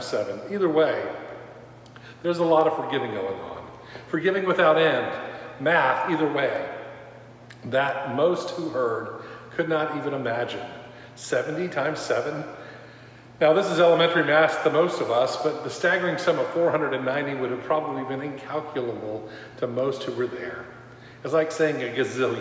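No technical faults can be heard anywhere in the audio.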